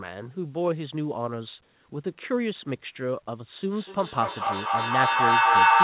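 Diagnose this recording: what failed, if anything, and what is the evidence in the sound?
A feedback howl takes over from 3.66 s to the end of the recording. It is an acoustic loop outside the equipment: two devices in the same room on the call, each picking up the other's loudspeaker. The tone settles near 1 kHz, repeats about every 200 ms, and peaks roughly 11 dB above the speech. Ordinary echo fades with each repeat. Here each pass gains level and narrows to the loop's favoured frequency, building until the loop is broken.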